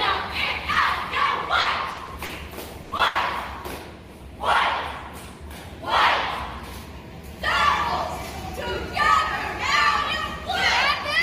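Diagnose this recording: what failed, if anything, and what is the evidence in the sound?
The failure is in the network stage. Packets went missing on the way to the decoder, and the receiver's concealment patched each hole.

Short concealed packet loss occurs at 0.73 to 0.77 s and again at 2.97 to 3.01 s, about 20 ms of invented audio each time. The decoder extended the preceding sound to fill the gap, then crossfaded back. You hear a tiny smear or wobble. On a spectrogram it appears as a thin vertical band where the fine detail goes blurred or repetitive, and the waveform shows no dropout.

Repeated packet loss (robotic sound) runs from 1.61 to 2.31 s. It has four separate gaps totalling 160 ms, which is about 23% of that stretch, and the longest is 60 ms. Each hole is filled by continuing the last sound, and the next hole arrives before the audio recovers. The result is a choppy, robotic texture. 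A spectrogram shows harmonics that freeze and restart in a stuttering pattern, and the waveform has repeated, copy-like segments.

Bursts of packet loss hit at 2.83 to 2.93 s and 3.07 to 3.17 s, 80 ms concealed each time. Several consecutive packets were lost, so the receiver held the last sound and faded it down, leaving a sustained buzz or decaying hiss. The material that should have been there is simply gone. On a spectrogram this appears as a smooth, frozen spectral slab, and the waveform envelope shows a tapering amplitude.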